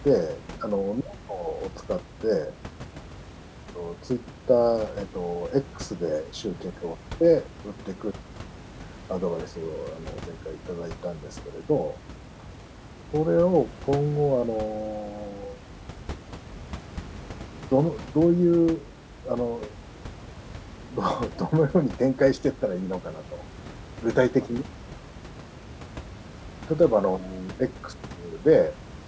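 No faults are audible anywhere in this speech recording.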